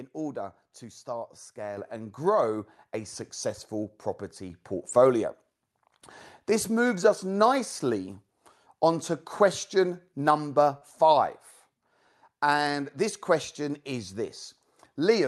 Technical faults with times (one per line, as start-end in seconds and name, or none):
1.77 microphone volume stepped up
2.79 microphone volume stepped up
4.50 microphone volume stepped up
10.77-10.83 short concealed packet loss